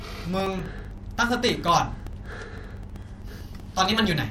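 From 0.08 s to 4.24 s, the speech carries periodic USB or driver dropouts. Every 64 ms, something stalls the audio path. About 2 ms goes missing, replaced by silence. The result is regular ticking, about sixteen per second, heard wherever sound is present.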